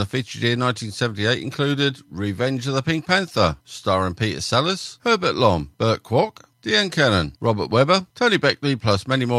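No technical faults are audible anywhere in the speech.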